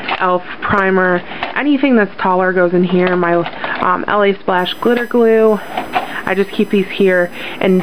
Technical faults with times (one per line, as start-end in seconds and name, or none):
4.58-7.83 USB whine